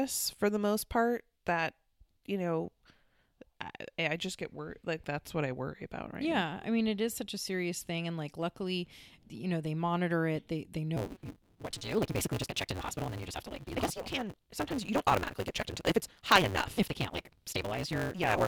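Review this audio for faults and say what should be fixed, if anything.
From 10.96 s to the end, the speech has a block size mismatch (truncated). One stage writes longer blocks than the next stage reads. The tail of each block is discarded. This puts a buzz at 188 Hz, the block rate. The speech also runs 1.88 times too fast while keeping its timbre. That buzz rate fits a 256-sample read size. To prevent it, make the reading stage use the same block length as the writing stage.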